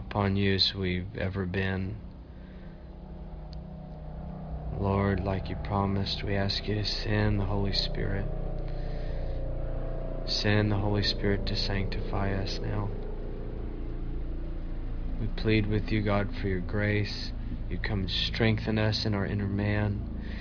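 No technical faults are audible.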